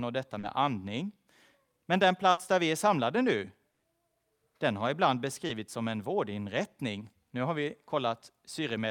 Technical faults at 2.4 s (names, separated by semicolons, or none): burst of packet loss